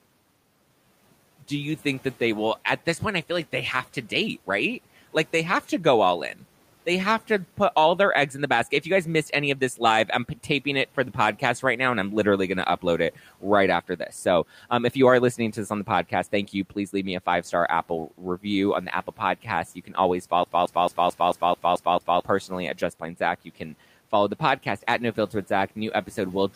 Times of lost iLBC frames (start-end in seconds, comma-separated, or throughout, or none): none